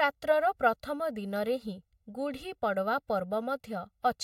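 From start to finish the speech carries channel delay (comb filtering): one channel trails the other by roughly 1.5 ms, and when the two are summed to mono the shared content cancels at evenly spaced frequencies, the first notch falling near 300 Hz. The voice sounds hollow and phasey throughout. Unlike a flanger or phaser, the notches never sweep; they stay fixed, so the coloration is constant rather than swirling.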